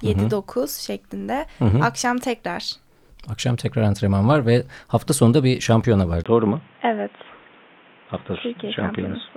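At 6.24 s, right after "sonunda bir şampiyona var", a 20 ms gap, then the speech goes dull and boxy with nothing above 3.7 kHz, plus a faint new hiss about 35 dB down, level unchanged. Likely an input switched to a poorer device, lasting to the end.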